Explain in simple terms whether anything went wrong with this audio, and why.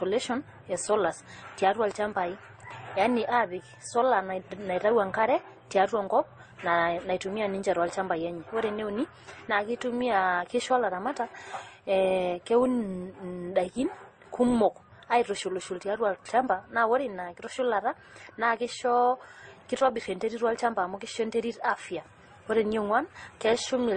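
Something did go wrong. Across the whole recording the speech sounds dull, with nothing above about 9 kHz, plus a mix of swirly and gritty smearing. That's likely transcoding between lossy codecs: squeezed by Opus, then squeezed again as MP3, with both sets of damage stacking.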